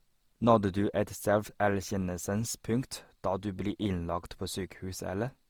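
Across the whole recording, the speech has likely been through repeated lossy encoding, most plausibly Opus at a rate near 48 kbit/s, with about four successive encode and decode passes. That is generation loss: each pass requantises on a shifted frame grid, so the errors stack up. The result is a swirly, hollow, smeared texture beyond what one pass at that rate would give, with softened attacks and nothing above 20.4 kHz.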